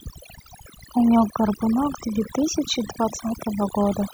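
Overdone noise removal runs through the whole clip: a noise reducer set too aggressively cuts individual frequency bands to near nothing whenever they sit close to its noise estimate. The background drops and breaks up into twinkling specks.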